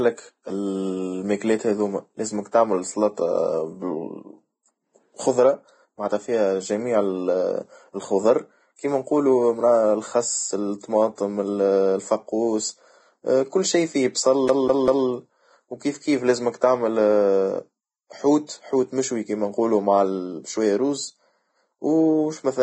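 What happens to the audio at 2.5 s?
Pre-echo occurs at 2.51 s. A transform codec spreads its quantisation noise across an entire block, so when a sharp onset lands late in that block, noise sized for the loud attack also spills into the quiet moment just before it. Here that spill lasts about 18 ms. It is heard as a brief hiss running ahead of the attack, which then sounds softened and smeared rather than crisp.

Around this moment, and across the whole speech clip, there is heavy codec damage. Nothing is present above 9.7 kHz, and the remaining treble is coarse and grainy, turning fine detail into hiss of similar energy and roughening tones. This points to Vorbis compression at a low bitrate, likely somewhere near 22 kbps. That coarse quantisation of each block is also what produces the pre-echo at 2.51 s.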